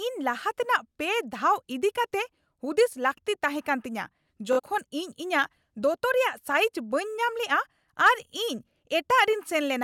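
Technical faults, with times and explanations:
4.53–4.60 s, Bluetooth stutter: the speech briefly buzzes as the receiver keeps replaying its last buffered slice while packets fail to arrive. About 46 ms of sound goes missing, which points to two lost packets, and speech resumes later, as if it had continued underneath.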